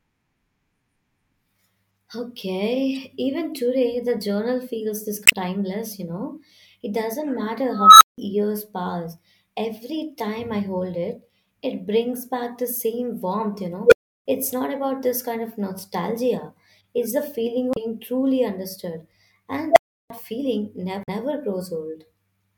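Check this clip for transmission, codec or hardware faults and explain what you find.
The speech has two kinds of fault, each occurring three times.

Damaged data in a compressed stream appears at 5.25–5.33 s, 17.72–17.77 s and 21.02–21.09 s. Corrupted bytes make the decoder misread frames and lose sync until it finds the next header. Each event is heard as a chirp, squawk, click or short hole. A spectrogram shows a short smeared broadband patch, and the waveform shows an abrupt discontinuity.

An unstable filter occurs at 7.72–8.18 s with a tone of about 1.5 kHz, at 13.85–14.26 s with a tone near 500 Hz, and at 19.71–20.10 s with a tone near 700 Hz. A recursive filter with bad coefficients runs away. The tone swells over 286 ms, 68 ms and 54 ms respectively, clips, then overflows into silence lasting 171 ms, 341 ms and 341 ms. On a spectrogram this is a bright horizontal line. The waveform shows a growing envelope hitting its clipping limit, then flatlining.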